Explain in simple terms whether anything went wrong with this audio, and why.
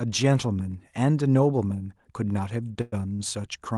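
Two brief interruptions occur near the end of this speech recording, both typical of audio sent over a call connection.

From 2.81 to 2.94 s there is a call audio freeze: the sound is held as a fading buzz for about 0.11 s. The likely cause is packets delayed in transit, leaving the receiver's jitter buffer empty until they arrived. The speech then resumes where it stopped, with nothing lost.

From 3.14 to 3.21 s there is a short stall from a late packet. One packet arrived late, so the receiver stretched the last sound for about 0.05 s, producing a slight held or buzzy moment before continuing. No speech is missing.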